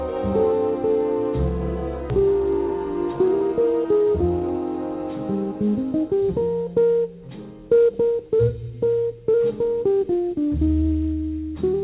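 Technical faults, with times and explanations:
2.1 s, skip ahead: playback jumps forward with no silent gap, so roughly 0.4 s of sound is simply missing and the two sides are butted together. Unlike a dropout, there is no hole or fill; the jump itself sheds the built-up delay.
2.19–2.70 s and 3.13–4.55 s, jitter buffer speed-up: the audio runs about 8% and then about 12% fast as the receiver trims pitch-period-sized pieces to drain its oversized buffer, removing roughly 40 ms and then about 200 ms. Pitch stays put, which separates this from a resampling error. The sound is hurried rather than higher, within the call path's band limit at 4 kHz.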